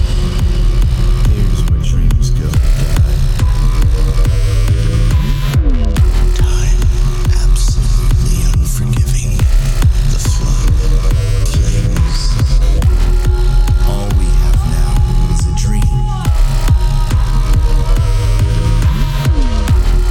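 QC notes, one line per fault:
Nothing stood out on listening to the audio.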